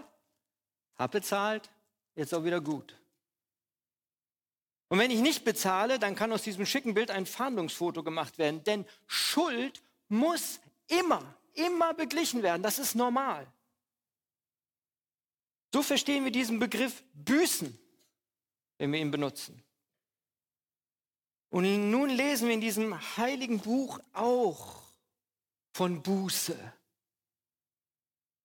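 No technical faults can be heard anywhere in the clip.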